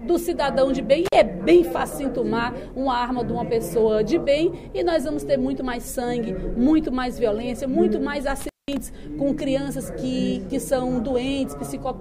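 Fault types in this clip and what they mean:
intermittent contact: at 1.05 and 8.41 s the signal path briefly opens, as a loose plug or cable would, dropping the sound for about 49 ms and then about 190 ms. Each break is edged with crackle, leaving faint hiss in the gap.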